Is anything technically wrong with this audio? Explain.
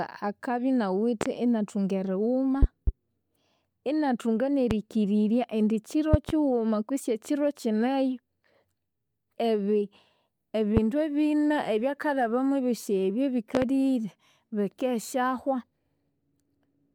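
Yes. Loud pops, roughly 15 dB above the speech, occur as doubles at 1.21–1.29, 2.63–2.91, 6.14–6.32 and 13.55–13.65 s (after "ebyisi ebi"), and singly at 4.71 and 10.77 s. They are likely voltage spikes from a switch, static or driver glitch, heard as sharp thumps while the speech continues underneath.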